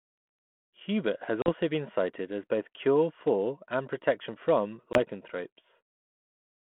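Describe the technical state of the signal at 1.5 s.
A packet-loss fault from 1.42 to 1.49 s: a hard-edged silent gap, then "been cited as both" returns slightly distorted: packet loss on an ADPCM call, about 40 ms dropped, desynchronising the G.726 decoder's predictor.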